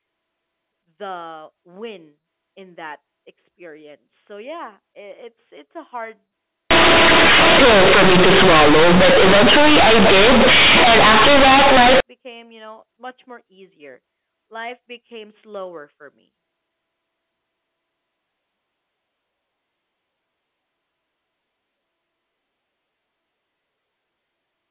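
From 6.71 to 12.0 s, right before "became you know much", there's companded audio read as linear: A-law bytes played as raw 8-bit samples, giving loud, buzzy distortion and heavy noise in the gaps.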